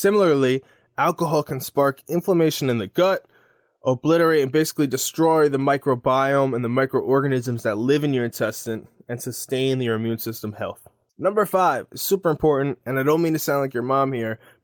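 Listening to this speech recording, nothing technically amiss stood out at any point.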